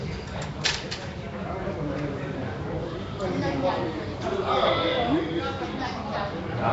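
From start to finish the audio carries a rough, hissy halo and a smeared, underwater blur, with nothing above about 7.7 kHz. This is likely Nellymoser compression, Flash's old codec, which starves weak bands of bits and fills them with noise, consistent with a 32 kbps stream.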